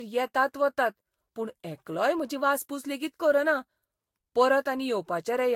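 Throughout the speech, the sound is swirly, smeared and hollow, with blurred attacks and nothing above 16.6 kHz. This points to generation loss, likely from about four successive lossy encodes near 60 kbit/s, each requantising on a shifted frame grid so noise accumulates.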